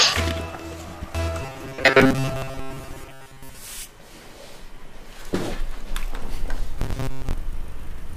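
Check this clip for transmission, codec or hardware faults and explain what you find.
Two stretches of robotic sound from repeated short buffers turn up, from 1.42 to 3.58 s and again from 6.79 to 7.33 s. In both, the audio collapses into a rigid, metallic buzz at 133 Hz that only loosely tracks the underlying sound. The likely cause is audio arriving too seldom, so playback loops the last fragment, roughly 7.5 ms long, in place of most of the real signal. Unlike dropouts or clicks, nothing goes silent. The fixed buzz pitch gives it away.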